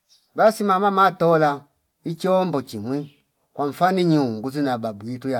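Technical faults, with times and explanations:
1.67–1.75 s, loose connector crackle: right after "basi mama matola", the speech breaks into a short, ragged burst of scratching for about 80 ms. A worn or dirty contact is making and breaking rapidly, chopping the signal on and off, and any DC on the line lands as pops at each break. On the waveform it shows as jagged dropouts and spikes; the spectrogram shows irregular broadband vertical streaks across that span.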